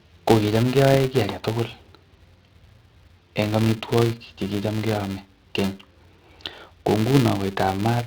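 Throughout the speech, a filter restarted on every block, losing its state at each boundary and adding a small transient, heard as a 375 Hz buzz that fits 128-sample blocks.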